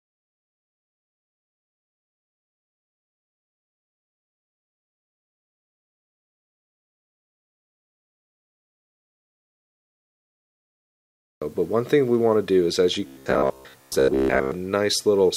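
From 13.07 to 14.52 s, new audio likely arrived too seldom, so the last short buffer, about 15 ms judging by the buzz rate, was replayed for most of the stretch. The result is robotic sound from repeated short buffers: a rigid, metallic 66.8 Hz buzz loosely following the original.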